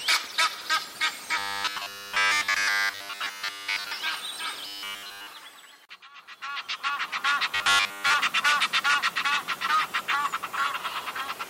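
From 1.38 to 3.92 s, 4.67 to 5.27 s and 7.55 to 8.14 s there is robotic sound from repeated short buffers. It is a rigid 100 Hz metallic buzz, likely a 10 ms chunk replayed while new audio arrived late. Unlike dropouts, it leaves no silent gaps. The last stretch is only partly buzzed.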